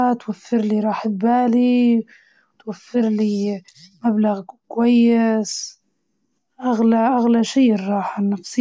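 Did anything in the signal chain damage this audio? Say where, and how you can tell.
No, nothing in the chain has left a mark on this speech that I can hear, so there's no damaged stage to point to.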